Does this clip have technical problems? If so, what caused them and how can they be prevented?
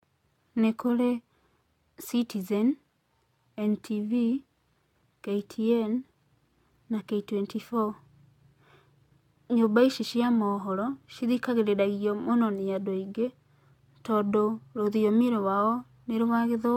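Yes. Generation loss runs through the whole clip: the speech sounds swirly, hollow and smeared, consonant attacks blur, and nothing is present above 17 kHz. This likely comes from repeated AAC-LC encoding, around five passes at a rate that fits 96 kbit/s, each adding fresh quantisation noise and spectral holes. To prevent it, keep a lossless master and encode to a lossy format only once, at the final step.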